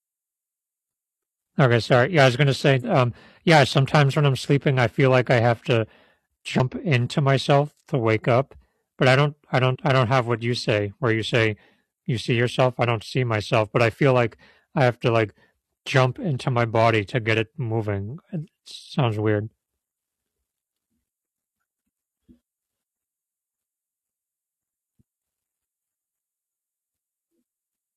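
Damaged data in the compressed stream causes brief glitches at 2.79–2.84 s after "I was gonna", at 6.60 s, and at 9.71–9.76 s between "but I don't I" and "I don't have what". The corrupted frames make the decoder lose sync and search for the next frame header.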